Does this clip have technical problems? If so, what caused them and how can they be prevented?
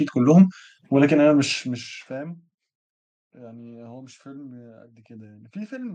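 No, no technical problems found.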